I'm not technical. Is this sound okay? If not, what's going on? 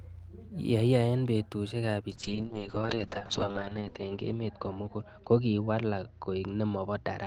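No. From 2.13 s to the end, there is a call bitrate drop. The call's connection weakened, so the speech was squeezed into far less data. It turns rough and muffled, losing its crisp upper sounds above 8 kHz, and is worst for about 1.3 seconds.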